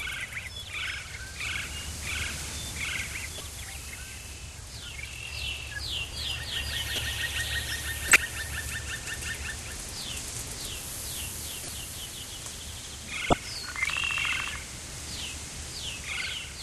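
A recording of everyday sounds with corrupt frames decoded in five places: 3.38–3.41, 6.96–7.03, 8.08–8.18, 11.63–11.70 and 13.30–13.33 s. Damaged compressed data was played anyway. Each spans one to a few frames. Each is a brief chirp or noise burst, some quite loud.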